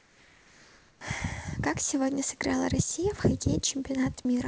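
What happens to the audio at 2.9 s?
Nothing goes wrong at 2.9 s; the speech carries straight through that moment without a break, dropout or added artefact.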